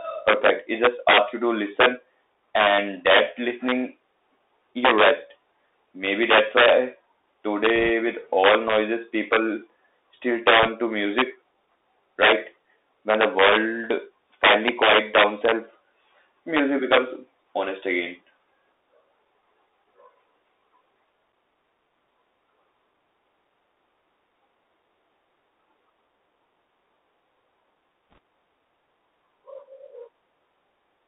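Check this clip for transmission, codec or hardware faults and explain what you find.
Two faults are present: the whole recording has passed through a Bluetooth CVSD headset codec, and three short bursts of bit errors on the Bluetooth voice link occur within it.

Bluetooth CVSD headset codec, throughout: the speech sits in a narrow telephone band of roughly 300 Hz to 3.7 kHz, which fits a 64 kbit/s CVSD link. This codec sends one up-or-down bit per sample with an adaptive step size. Loud, fast-rising sounds outrun the step, so sibilants turn scratchy and a granular hiss lies under the speech. The damage is plainly audible.

Bit errors on a Bluetooth voice link, at 7.76 to 7.90 s (just before "with all noises people"), 10.63 to 10.68 s (between "all noises people still" and "to music"), and 28.12 to 28.18 s: flipped bits each nudge the CVSD step only slightly, and their effect decays. The result is a brief rushing crackle, not hard clicks. 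The error rate is under 1 percent in the first two bursts and about 1.5 percent in the last, which is audibly rougher.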